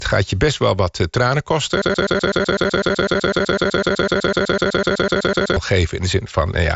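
A stalled player or stream, likely holding its last buffer, produces a broken-record loop from 1.82 to 5.57 s: the same 125.5 ms slice of speech repeats 30 times back to back, replacing the audio that should have played. Within that loop, at 2.64 s, dropped samples, most likely a gap of a tiny fraction of a millisecond, make the waveform jump and leave one sharp click. The Bluetooth mSBC headset path carries the speech up to about 8 kHz.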